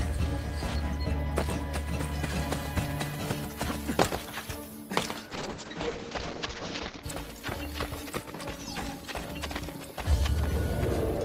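At 5.35 s there's a call bitrate drop. The encoder got starved, and everything above about 8 kHz vanishes, leaving the sound rough and muffled. That fits a fall from around 32 kbps to about 7 kbps. It recovers by 7.09 s.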